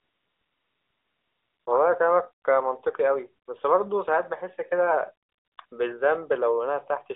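A speech clip carried over a mobile call, with AMR comfort noise in its pauses. The sending phone judged the line silent and stopped transmitting speech frames, so the receiver filled those gaps with synthetic noise built from a rough description of the background's level and spectrum. That happens from 0.00 to 1.66 s, briefly at 3.46 to 3.48 s, from 5.28 to 5.58 s and from 5.66 to 5.72 s. In each stretch the real background gives way to a smooth, even hiss that switches in and out, and quiet sound at the edges of those stretches can be clipped away. The narrowband mobile codec path itself is audible as a band limited to roughly 300 Hz to 3.6 kHz, with light coding damage that points to AMR-NB at around 12.2 kbps.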